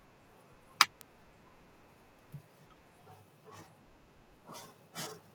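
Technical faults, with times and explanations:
1.01 s, bit error spike: a single sample leaps to about -19 dBFS and drops straight back, which is what happens when one bit of a stored or transmitted sample value flips and the number changes by a power of two. Because the jump lasts one sample, it is heard as one sharp tick with no relation to the speech around it. On the waveform it shows as a lone vertical needle, and on the spectrogram as a thin broadband line from bottom to top.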